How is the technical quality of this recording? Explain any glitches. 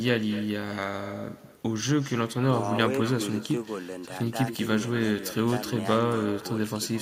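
The quality is compromised by one fault that runs through the whole recording. It is echo with no canceller. From start to finish, the speech is shadowed by a delayed copy of itself. The far end is playing the call through a loudspeaker. Its microphone picks that sound up and sends it straight back, and nothing subtracts it. The copy trails the original by around a fifth of a second. It sits about 16 dB below the direct speech. It sounds quieter and thinner.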